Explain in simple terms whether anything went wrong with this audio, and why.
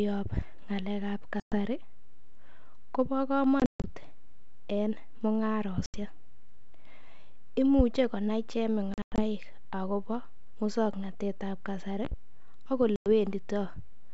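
The speech drops out into sudden silent gaps at 1.40 to 1.55, 3.60 to 3.85, 5.86 to 5.97, 8.94 to 9.22 (just before "agobo muswoknatet") and 12.96 to 13.08 seconds. After each gap the sound comes back slightly distorted before settling. This is packet loss on an ADPCM call: chunks of the call never arrived and were replaced by silence. Each gap lasts roughly a tenth to a fifth of a second, and the ones at 3.6 and 8.9 seconds are broken into shorter holes. ADPCM predicts each sample from the last, so after a gap the receiver has lost track for a moment.

A loud pop sits on top of the speech at 7.8 seconds, and two quick pops come between 12.05 and 12.15 seconds. The speech carries on underneath. This is a sudden electrical jolt, likely from a plug, a switch or static, added to the signal.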